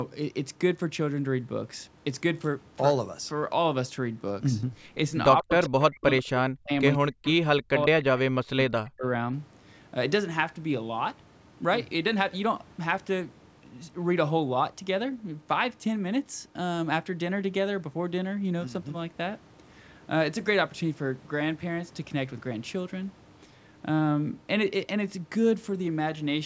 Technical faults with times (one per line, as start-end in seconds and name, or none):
5.43-6.07 speech suppressed in double talk
5.64-5.69 echo leak
6.02-6.22 echo leak
6.39-6.71 speech suppressed in double talk
6.98-7.27 speech suppressed in double talk
7.28-7.33 echo leak
7.61-9.04 speech suppressed in double talk